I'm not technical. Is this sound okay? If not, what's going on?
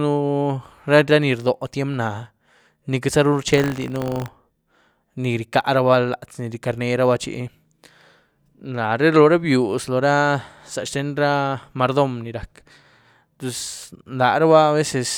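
No. From 3.48 to 4.30 s the speech takes on a robotic 50 Hz buzz. This is buffer tearing: the playback system is reading audio while it's still being written, so each small chunk briefly repeats a sliver from a moment earlier. Unlike steady electrical hum, the buzz appears only while there's sound.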